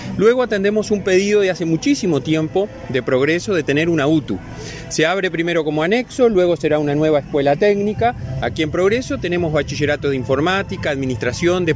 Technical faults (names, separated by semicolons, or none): none